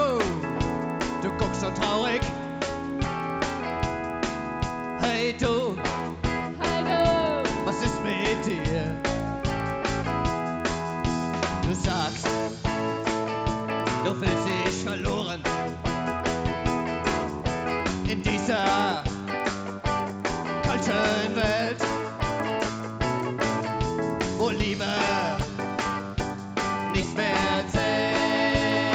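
Throughout the clip, the resampler restarted on every block: each 100 ms block was converted on its own, likely from 16 kHz up to 48 kHz, leaving a small error at every edge. The result is a steady tick at 10 Hz, heard only while sound is present.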